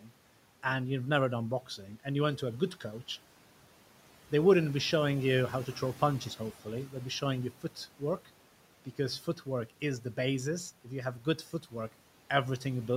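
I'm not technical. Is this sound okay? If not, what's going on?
No. There is speech cut by the noise suppressor at 0.01–0.12 s, 7.51–7.77 s, 9.21–9.47 s and 11.2–11.73 s. The cleanup filter mistook bits of speech for background noise. For a split second each time, sounds turn faint or swallowed.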